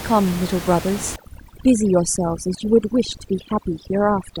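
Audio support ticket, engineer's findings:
Overdone noise removal, 1.16 s to end of clip. Background drops and breaks up into twinkling specks. Probable component: noise reduction stage set too aggressively. Bands near its noise estimate, with room noise about 12 dB below speech, are cut hard or gated off, and quiet speech detail is stripped with them.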